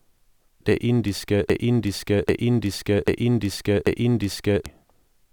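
From 1.50 to 4.66 s, a broken-record loop repeats one 0.79 s speech fragment four times, likely from a stalled stream; spectrograms show identical, tiled blocks.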